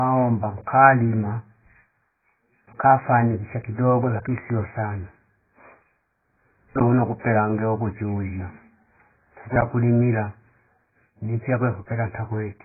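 From start to end, the speech has nothing above 2.5 kHz. It sounds dull and muffled. This is likely low-bitrate audio saved at a high bitrate: a very low-rate encode removed the top end, and the later high-bitrate MP3 could not bring it back.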